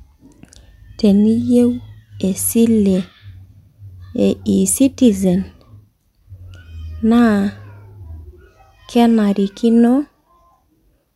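Speech with no audible faults.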